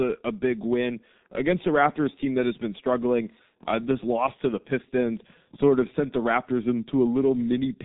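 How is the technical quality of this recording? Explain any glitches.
The technical quality is poor throughout. The speech sounds muffled and hoarse, with smeared consonants, from heavy G.723.1 codec damage. The codec discards everything above 4 kHz and updates its voice model only every 30 ms, which fits a 6.3 kbit/s stream.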